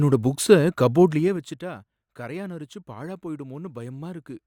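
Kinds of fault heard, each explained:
Zipper noise: From 1.02 to 1.62 s the speech is pulled down by around 15 dB, and a fine ticking rides on it the whole way, roughly ten small clicks a second. The fade is not smoothed. Instead the gain drops in hard 2 dB jumps, each landing abruptly mid-waveform. Each jump leaves a tiny discontinuity, so the level change itself becomes an audible zipping texture instead of a clean fade.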